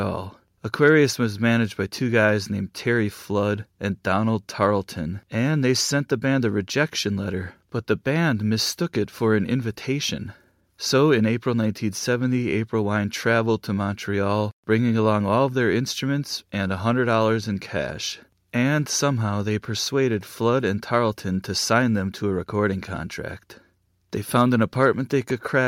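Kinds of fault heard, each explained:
No technical faults are audible anywhere in the speech.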